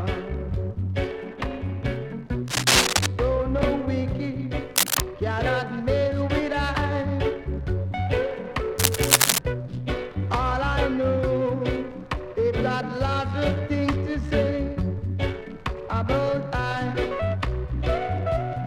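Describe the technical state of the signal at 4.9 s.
At 4.9 s you're right in the middle of a burst of cable scratch noise running from about 4.76 to 5.00 s, so roughly a quarter of a second. It's a dense, ragged rustle sitting on top of the sound, and it's loud, a few dB above the signal itself. The likely cause is a worn cable, connector or control being moved, so the contact resistance jumps around rapidly and throws those uneven noise bursts into the path.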